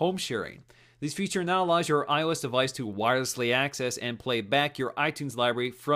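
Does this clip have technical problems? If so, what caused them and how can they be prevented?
No, there are no technical problems to point to in this clip. Nothing in the audio calls for a cause to be traced or a fix to be made.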